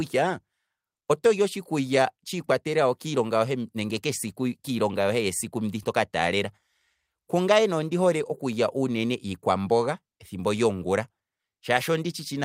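Nothing in the speech here calls for comment on the technical side, since no faults turn up anywhere along the way.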